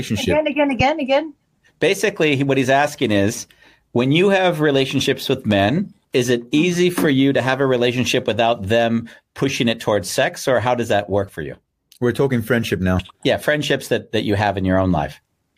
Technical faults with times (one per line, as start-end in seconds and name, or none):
0.80-0.83 loud pop
5.51-5.54 loud pop